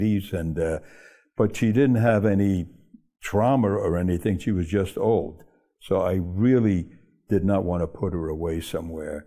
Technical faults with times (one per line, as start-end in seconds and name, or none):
none